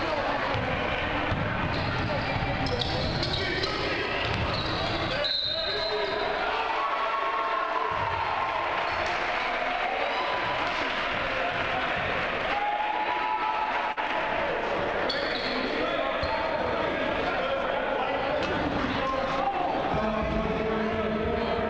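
Call audio with nothing above 8 kHz, which fits a wideband call codec. From 13.92 to 13.98 s there's short concealed packet loss: about 40 ms never arrived, so the receiver stretched the preceding sound over the gap, leaving a brief smear.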